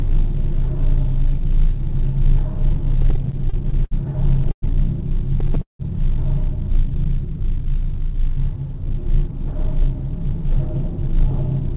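From 3.02 to 3.93 s the sound drags and stutters through eight brief holds, the longest 70 ms. These are repeated stalls (stutter): late packets kept emptying the jitter buffer, and the receiver stretched the last sound each time, about 171 ms in all, with nothing lost.

At 4.51 to 4.64 s a call audio freeze briefly suspends the sound for 110 ms, mostly silence. A likely cause is delayed packets emptying the buffer before playback resumed where it stopped.

The stutter returns from 5.40 to 5.81 s, now four stalls covering half the span, one lasting 178 ms, again with filled-in sound rather than missing material.

From 8.89 to 11.62 s the audio runs about 2% fast at unchanged pitch. This is a jitter buffer speed-up, where the receiver trimmed short pitch-period slices, around 50 ms in total, to shed excess delay. Throughout, the sound stops at 4 kHz, which fits a narrowband G.711 call path.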